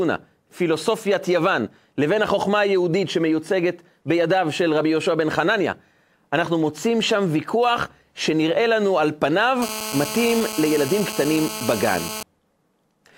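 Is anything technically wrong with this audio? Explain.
Yes. From 9.62 to 12.23 s, GSM phone buzz: a nearby phone's call bursts, rectified, make a steady raspy 217 Hz buzz, shown as stacked harmonic spectrogram lines.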